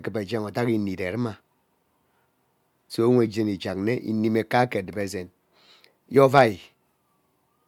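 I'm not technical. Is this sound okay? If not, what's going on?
Yes, this speech recording has no technical problems.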